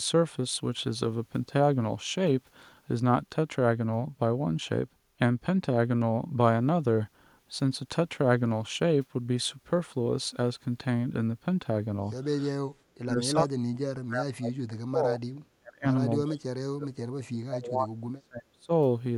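From 12.64 to 15.22 s, then 15.59 to 15.87, 16.23 to 16.95 and 17.29 to 18.71 s, the speech is pulled down by as much as 40 dB in chunks. This is speech suppressed in double talk, likely an echo canceller failing to separate this side's talk from the overlapping loudspeaker echo and turning both down. Unlike packet-loss dropouts, the cuts are gain dips that come and go with overlapping talk.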